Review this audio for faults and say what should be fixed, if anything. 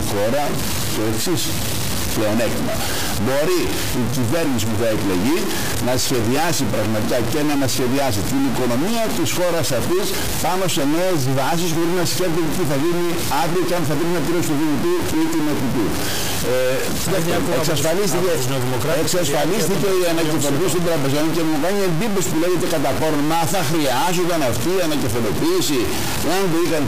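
A harsh, buzzy distortion runs through the whole clip, and the pauses fill with gritty noise instead of going quiet. That points to a likely stuck bit: one fairly high bit, worth around -15 dBFS, pinned so that roughly half the samples land wrong. Worth checking the converter and its data lines, and running a bit-pattern test on the interface before recording.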